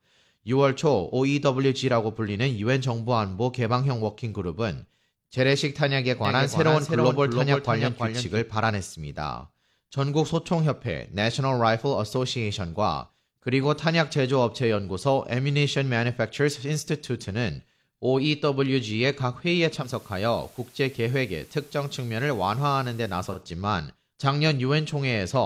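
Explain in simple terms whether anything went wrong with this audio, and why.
A doubled audio track appears from 6.25 to 8.43 s. The speech is heard twice, with a second, quieter copy trailing about a third of a second behind and starting and stopping abruptly, likely because the same sound was captured again through a slower path.

Digital radio blending to analogue happens from 19.77 to 23.43 s. The radio lost its digital signal and cross-faded, over about 0.13 s, to the station's FM broadcast, then back. During that stretch a faint hiss comes in and the speech drops slightly in loudness.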